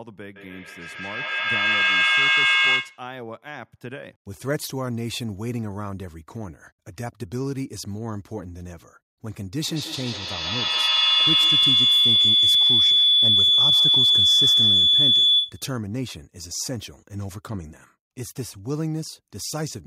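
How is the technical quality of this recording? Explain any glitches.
Two feedback problems spoil the recording. It sounds like two devices in the same room joined the same call.

From 0.36 to 3.15 s there's feedback echo between two devices. The speech comes back roughly every 150 ms, getting thinner each pass and peaking about 9 dB above the voice.

From 9.66 to 15.77 s there's feedback howl. The loop gains on each trip and builds into a ring near 3 kHz, pulsing at about 150 ms and reaching about 11 dB over the speech.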